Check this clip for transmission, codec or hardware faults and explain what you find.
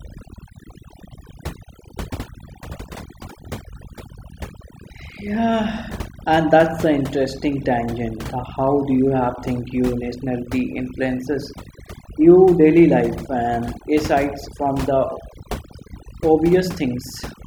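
One fault is present, and it comes from processing rather than transmission or hardware: overdone noise removal, running through the whole speech clip. A noise reducer set far too hard cuts individual frequency bands whenever they sit near its noise estimate, taking quieter parts of the voice too. The background drops and breaks up into twinkling specks. Unlike codec artefacts, which follow the bitrate, these specks track the noise floor.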